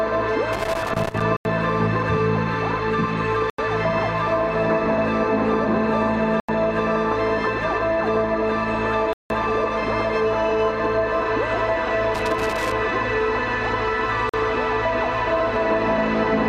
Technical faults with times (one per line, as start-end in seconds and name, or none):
0.53-1.22 loose connector crackle
1.37-1.45 block of digital silence
3.50-3.58 block of digital silence
6.40-6.49 block of digital silence
9.13-9.30 block of digital silence
12.15-12.72 loose connector crackle
14.29-14.34 block of digital silence